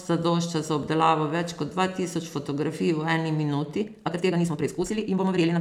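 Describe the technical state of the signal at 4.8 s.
At 4.8 s the speech sounds rushed, running at roughly twice its natural pace with the pitch unchanged. This is a time-stretched section from 3.77 s to the end, just after "v eni", likely squeezed by 1.92 times through dropping short pieces to preserve pitch.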